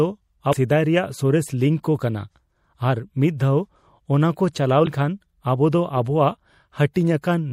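The speech carries a watery, swirling quality from start to end. S sounds chirp and turn metallic. Consonant attacks smear. The likely cause is MP3 compression at a low bitrate. The damage is plainly audible and fits an encode near 64 kbps. With so few bits, weak frequency components flicker on and off between frames, which creates the swirl.

From 0.49 to 0.54 s, just before "ᱥᱮᱫᱟᱭ ᱨᱮᱭᱟᱜ ᱥᱚᱨᱮᱥ", there is a brief glitch of about 40 ms. This is damaged data in a compressed stream. Part of the encoded data is wrong, so the decoder misreads those frames. It loses sync and hunts for the next valid frame header. The same fault returns from 4.84 to 4.88 s, right after "ᱢᱤᱫ ᱫᱷᱟᱣ ᱚᱱᱟᱠᱚ ᱪᱟᱞᱟᱣ". It is again a short blip, about 40 ms long.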